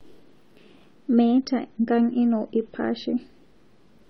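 From 1.10 to 3.10 s the speech shifts abruptly to a lower-bitrate rendition of the adaptive stream, with nothing above 7.1 kHz and thicker codec artefacts, which fits a step down from about 96 to about 27 kbit/s AAC. Unlike a rebuffer, playback never pauses or leaves a gap.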